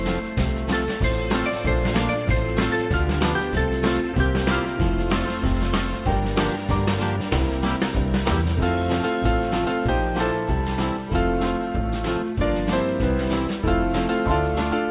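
No faults to report: level, timing and continuity hold steady across the whole clip with nothing audible breaking in.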